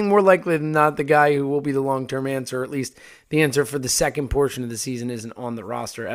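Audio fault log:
No faults can be heard anywhere in the speech.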